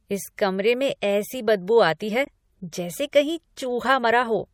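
From the start to the end, the speech carries plainly audible MP3 compression, likely from encoding at about 64 kbps: dulled treble, watery swirl and smeared consonants. At 2.25 to 2.28 s, between "ऐसी बदबू आती है" and "जैसे कहीं", damaged data in a compressed stream makes the decoder lose sync, giving a brief glitch.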